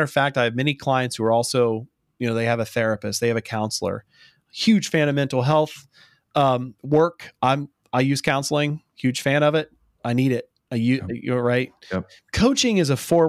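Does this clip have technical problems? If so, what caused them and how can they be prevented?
No, this clip has no technical problems, so there is nothing to prevent.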